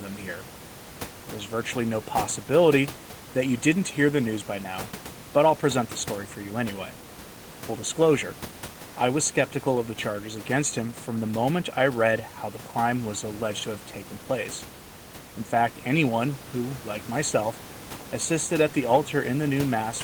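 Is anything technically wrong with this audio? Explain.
No, nothing here is technically wrong.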